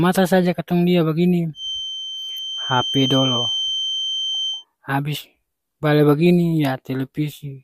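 From 1.53 to 4.65 s a feedback whistle runs beneath the speech: a thin 3.1 kHz tone roughly 5 dB down, swelling and fading slowly in level. A loudspeaker-to-microphone loop is likely held right at the edge of feedback. Unlike runaway howl, it never builds.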